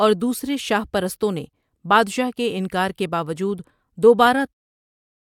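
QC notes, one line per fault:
No technical faults are present in the speech signal, and the smooth fade-out that closes it, beginning around 4.5 s and ending at 4.54 s, is a deliberate edit with no click or hard edge.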